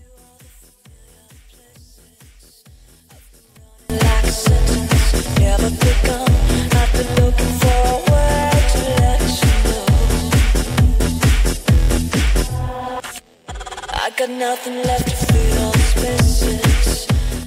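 From 0.0 to 3.9 s the sound collapses to a faint trace, about 32 dB below what follows. The likely cause is one channel inverted: with one stereo side in reversed polarity, everything shared between left and right cancels when summed, leaving only their difference. On a waveform this opening section is a thin sliver before full amplitude returns; a spectrogram shows it pale.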